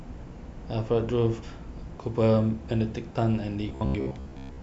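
From 3.69 to 4.62 s the speech goes robotic, a rigid 66.8 Hz buzz, likely from short buffers being repeated, with most of the real audio skipped.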